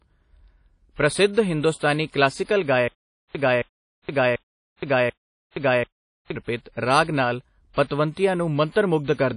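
Throughout, the speech has plainly audible codec damage: a ringing, washy sound with hiss that breathes with the signal, and nothing above 10.1 kHz. This is likely WMA compression at a bitrate that fits 32 kbps, not mere low-pass filtering.

From 2.88 to 6.36 s, a stutter with silent gaps repeats the same 0.27 s fragment four times, each followed by 0.47 s of silence. This points to a stalled stream replaying its last fragment, and the audio that should have filled this stretch is lost.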